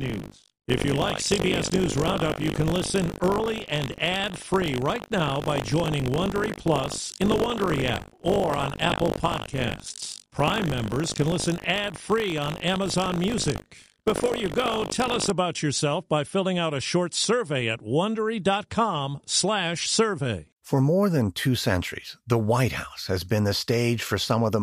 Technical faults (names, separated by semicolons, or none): buffer tearing